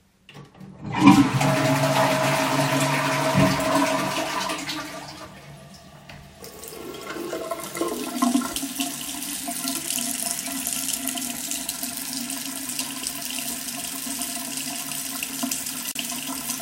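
A recording of sounds with a gap at a join of encoded pieces at 15.92 to 15.95 s: a gap of about 39 ms cuts into continuous sound, left by encoder start delay and final-frame padding kept when separately encoded pieces were joined. A spectrogram shows a narrow blank vertical band with smeared edges.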